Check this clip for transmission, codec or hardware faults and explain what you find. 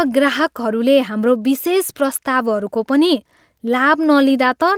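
I found no faults to report in this clip.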